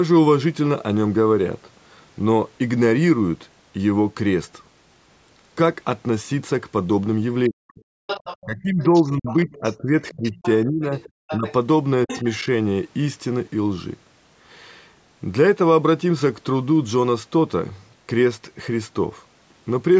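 From 7.49 to 7.8 s the speech drops sharply, by around 40 dB. This is likely speech suppressed in double talk, with the echo canceller turning the talker down while the far side was also speaking. From 8.07 to 11.53 s a second voice sits about 10 dB under the speech, likely the other side's voice leaking through from the loudspeaker past the canceller. Within that stretch, from 8.44 to 11.46 s, the talker dips in pieces by up to about 25 dB, likely the same double-talk suppression. A brief scrap of the leaking voice returns from 12.08 to 12.22 s, likely the same leak.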